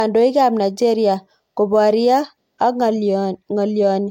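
Low-bitrate audio saved at a high bitrate runs throughout this speech. Nothing is present above 16.6 kHz, and the lingering artefacts point to an earlier low-rate encode, likely around 64 kbit/s, whose losses the later high-rate MP3 could not restore.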